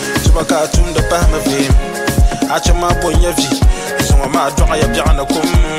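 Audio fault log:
Nothing stood out on listening; no fault could be heard anywhere in the clip.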